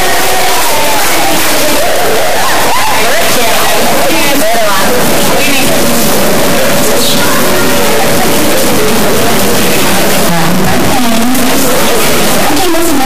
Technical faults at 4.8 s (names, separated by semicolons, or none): stuck bit